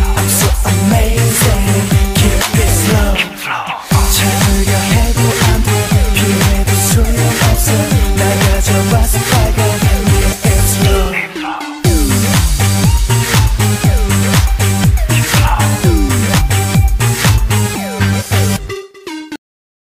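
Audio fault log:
9.13–9.17 s, 16.37–16.42 s and 18.18–18.23 s: compressed frames skipped. The audio jumps ahead by about two 46.4 ms frames (roughly 100 ms) at the first two points and about four (roughly 200 ms) at the third.
19.36 s: cut-off end. The final buffers were never played, so the sound stops mid-event and falls straight to digital silence with no natural decay. That abrupt truncation is heard as a hard stop at the cut point, leaving silence to the end.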